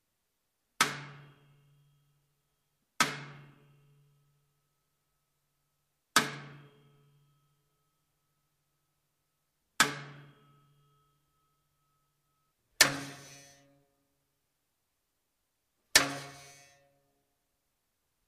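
No technical faults can be heard anywhere in this audio.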